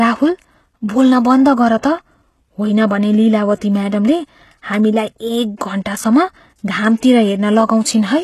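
From start to finish the speech carries plainly audible codec damage, most likely HE-AAC compression at a very low rate, which fits a bitrate around 16 kbps. The upper band is not the original signal but lower spectrum copied upward under a coarse envelope, so s sounds come out gritty and metallic rather than crisp. A spectrogram shows blocky, repeated texture in the treble and nothing at all above 12.3 kHz.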